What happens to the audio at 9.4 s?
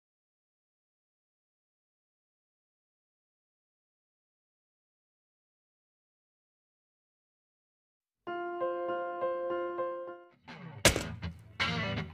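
Nothing goes wrong at 9.4 s; the audio plays through that moment intact, with no dropout, click, distortion or other fault.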